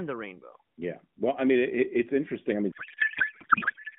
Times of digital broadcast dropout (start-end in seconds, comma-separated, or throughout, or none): none